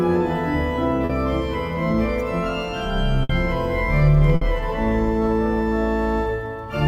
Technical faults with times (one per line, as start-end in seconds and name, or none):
1.05-1.11 short concealed packet loss
3.23-3.31 burst of packet loss
4.35-4.43 burst of packet loss